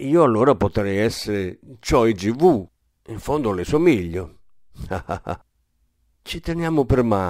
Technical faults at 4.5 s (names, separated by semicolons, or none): crude rate conversion